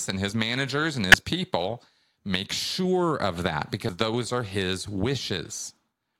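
At 1.12 to 1.14 s and again at 3.89 s the speech breaks briefly from damaged data in a compressed stream: corrupt bytes make the decoder misread frames and resynchronise, leaving a short disruption on the spectrogram and in the waveform.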